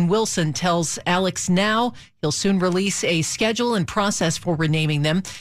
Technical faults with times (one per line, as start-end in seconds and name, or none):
none